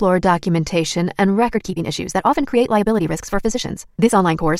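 From 1.48 s to the end, a time-stretched section runs at about 1.7 times its natural pace. Software likely compressed this part to fit a shorter length, holding the pitch steady by dropping short slices of the waveform rather than resampling. The result is an abrupt change of tempo at 1.48 s: the audio suddenly sounds rushed and hurried, yet its pitch stays where it was, so it doesn't rise the way a simple speed-up would.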